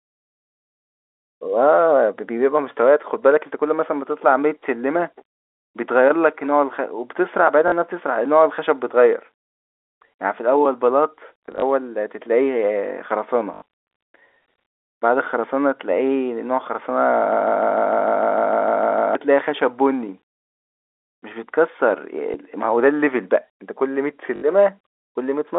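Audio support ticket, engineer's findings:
Packet loss with last packet repeated: jitter buffer or receiver replaying the previous packet over gaps, which fits 20 ms packets. Robotic stutters at 7.68–7.72 s (40 ms), 13.54–13.62 s (80 ms) and 24.36–24.42 s (60 ms); small blips at 11.46–11.62 s (80 ms in scattered 20 ms bursts) and 22.32 s (20 ms).

Broken-record loop: likely a stalled player or stream resending its last held fragment. From 17.32 to 19.15 s a 150 ms piece repeats 12 times back to back, and the audio for that span is lost.

Both faults sit on a G.711 mu-law telephone line limited to about 300 Hz–3.6 kHz.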